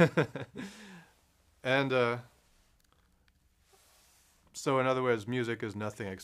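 Listening through the recording, nothing stood out as a technical problem at any point.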